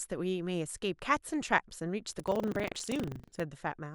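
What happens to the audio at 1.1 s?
Nothing goes wrong at 1.1 s; the speech continues intact through that moment with no audible fault.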